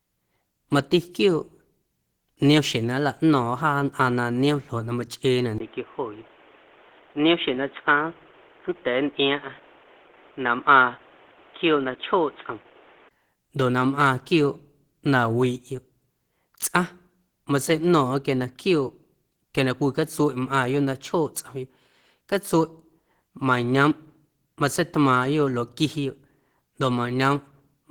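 From the start to the end of the speech there's a steady layer of codec damage that sounds like Opus compression, likely at a low rate that fits about 16 kbps in the hybrid speech mode. The band still reaches about 20.1 kHz, but the encoder doesn't have the bits to describe the upper bands properly, so it fills them in. You hear that as a grainy, hoarse roughness on the speech, clearly audible rather than subtle.

At 5.58 s, just before "ndoꞌ na", there's a brief gap of about 20 ms, and then the sound suddenly turns dull and boxy. That points to an input switched to a poorer device, likely another mic or a headset falling back to its call profile. Nothing comes through above about 3.8 kHz, and a new noise floor sits roughly 30 dB under the speech, although the loudness barely changes. At 13.11 s the fuller sound returns.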